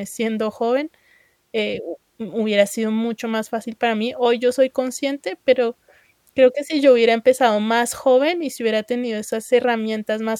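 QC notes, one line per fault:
Nothing to flag here; the speech comes through with no faults to note.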